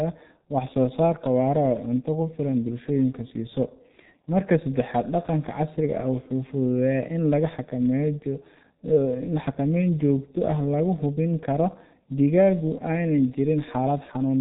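All the way through, the speech carries heavy G.723.1 codec damage, muffled and hoarse with smeared consonants and nothing above 4 kHz, which fits a bitrate around 6.3 kbit/s.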